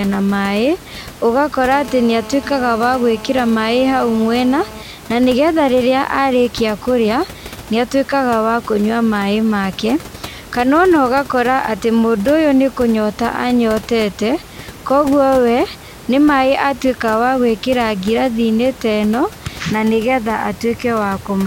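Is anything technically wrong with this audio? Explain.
Yes, there are two kinds of phone interference, one after the other.

From 1.74 to 4.83 s a hard, raspy buzz at 217 Hz, rich in harmonics, sits steadily under the speech at about 18 dB below it. This is GSM phone buzz: a nearby 2G phone in a call transmits 217 bursts per second, and the audio circuit rectifies those radio pulses into sound.

From 4.94 to 6.38 s the buzz changes into even ticks with a longer 217 Hz buzz twice a second, roughly 25 dB below the speech. These are GSM signalling bursts: the phone, still in its call while its user is silent, sends only short groups of bursts, which the circuit again rectifies.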